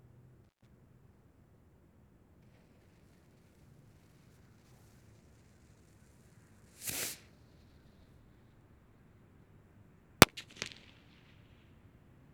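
A recording of everyday sounds with an intermittent contact at 0.45–0.67 s: a loose cable or plug opens for about 135 ms, cutting the audio with crackle at both edges and faint hiss between.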